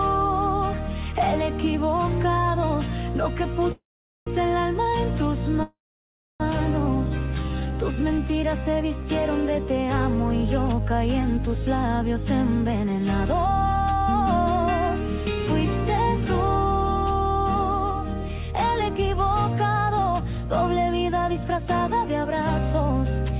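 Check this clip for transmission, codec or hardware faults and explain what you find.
Five transmission faults come through on a narrowband call path, with nothing above 4 kHz, which fits G.711 mu-law coding.

Call audio freeze, 3.72 to 4.29 s and 5.63 to 6.42 s: the sound stalls, a brief fading continuation trails off into silence for about 0.44 s and 0.64 s, and then the audio resumes exactly where it stopped. Likely cause: held-up packets emptied the jitter buffer, so 0.55 s and 0.77 s of filler were inserted with nothing lost.

Jitter buffer slow-down, 7.26 to 8.23 s: the audio drags at 86% speed with unchanged pitch, and sounds are stretched out. The receiver repeated single pitch periods and bits of pauses to rebuild its reserve, adding 0.15 s.

Jitter buffer speed-up, 17.4 to 18.98 s and 21.12 to 22.26 s: the audio hurries along at 106% speed, pitch intact. With too much audio queued, the receiver trimmed small pitch-period chunks, roughly a tenth of a second in the first stretch and a bit less in the second.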